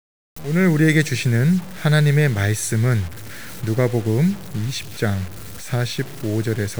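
From start to finish the speech carries a grainy, fizzing distortion that rises and falls with the voice itself, gritty on quieter syllables and breaking into a rough sputter as sounds fade toward silence. The likely cause is low bit depth without dither: the audio seems to have been truncated to about 6 bits, so each sample snaps down to a coarse step, leaving an error that tracks the signal at roughly 20 dB below it.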